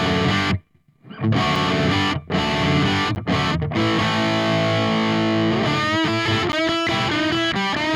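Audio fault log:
1.56, 3.15 and 6.52 s: block of digital silence. The audio drops to silence for 5 ms, then 10 ms twice, and resumes with no fade, and each gap is heard as a tick. Unlike a lone click, a flat gap sits between the edges.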